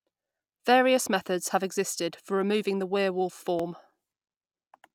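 At 1.45 s, before "have existed for removing", and at 3.60 s, after "for removing the werewolf", the speech jumps a few milliseconds ahead. The likely cause is a dropped buffer (overrun): unread samples were overwritten.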